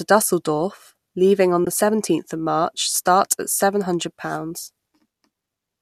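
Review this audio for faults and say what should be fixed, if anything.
A short soft-edged gap sits in the speech from 1.65 to 1.67 s. This is AAC frame loss with muting. About 20 ms of audio is missing, which fits two lost frames from what is likely a low-delay AAC stream. The decoder zeroed their spectrum. The overlapping windows fade the sound out and back in. Adding redundancy or forward error correction to the stream would prevent it.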